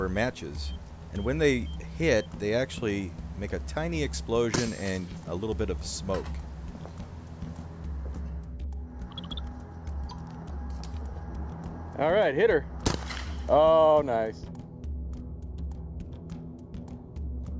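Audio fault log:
No faults detected in this audio.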